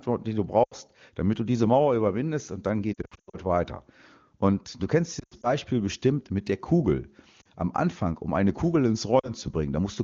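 Speech over HD Voice shows lost AMR speech frames at 0.64–0.74 s after "die du", 2.94–3.37 s after "überwindest und dann", 5.19–5.56 s after "du kennst", and around 7.41 s and 9.19–9.33 s. Corrupted frames were replaced by decoder concealment that repeats pitch and spectral shape with falling gain, giving smeared, fading gaps. A spectrogram shows stretched harmonics dimming toward silence, and the waveform shows envelope dips.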